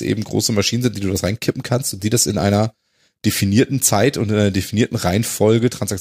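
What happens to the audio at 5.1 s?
Nothing goes wrong at 5.1 s; the speech carries on intact through that moment, with no dropout, click or other fault to be heard.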